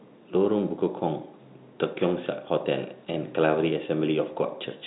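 No technical faults occur at any point in this speech, which comes through a G.711 telephone path with nothing above 3.9 kHz.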